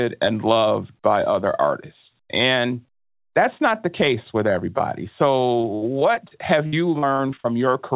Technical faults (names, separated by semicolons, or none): short concealed packet loss; repeated packet loss (robotic sound)